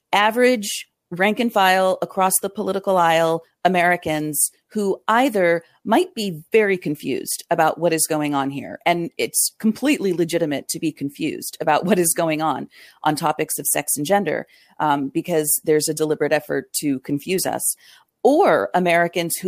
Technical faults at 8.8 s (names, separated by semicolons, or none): none